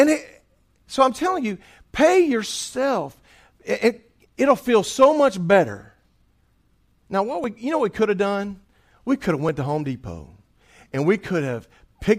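Speech with three quick skips where the audio jumps ahead with no gap: at 6.43 s right after "feel so much better", at 7.44 s just before "we you know what", and at 9.49 s after "could have". Each skips only a few milliseconds, most likely a dropped buffer (overrun) where samples got overwritten before being read.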